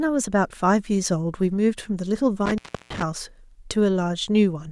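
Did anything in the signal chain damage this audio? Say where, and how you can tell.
Yes. Intermittent contact in the analogue wiring damages the speech between 2.46 and 3.03 s, where the line opens for about 326 ms. A loose plug or cable breaks the circuit, so the sound cuts out with crackle at each edge and faint hiss underneath, unlike a clean digital dropout.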